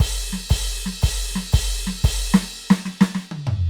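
The music comes through with no audible dropouts, distortion, level jumps or timing glitches anywhere in the signal.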